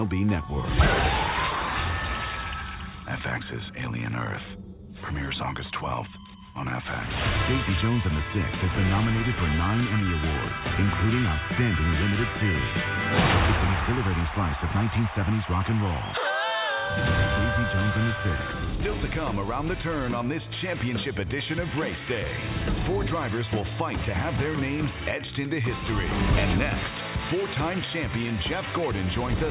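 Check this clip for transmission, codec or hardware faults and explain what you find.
No transmission, codec or hardware faults can be heard; the audio has the narrowband character of a normally working WebRTC call path, with nothing above 4 kHz, which fits a G.711 A-law link at 64 kbps.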